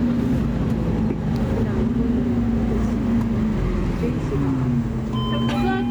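Right from the start and all the way through, there's gain pumping. The level swings by roughly 5 dB. Loud and soft moments end up sitting closer together, so everything feels squashed. The likely cause is input gain set far too hot, with a fast limiter or compressor clamping down on every loud sound.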